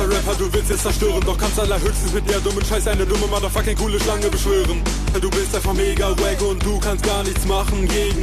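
Damaged data in a compressed stream appears twice, at 0.72 s and again at 5.13 s, each a very brief glitch lasting under 20 ms. At both moments the coded bytes reaching the decoder were corrupted, so it could not rebuild those frames correctly and had to resynchronise on the next valid frame header. What comes out is a short, hard blip or chirp that breaks the continuity of the sound.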